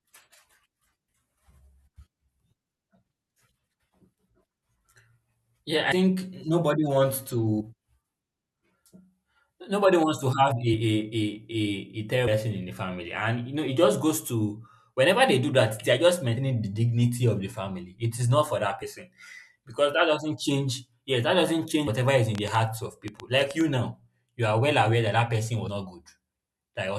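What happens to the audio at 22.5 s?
A train of clicks runs from 22.35 to 23.62 s: roughly ten similar, unevenly spaced pulses, about 7 per second, sitting well above the speech. The most likely source is interference or a faulty connection or power supply.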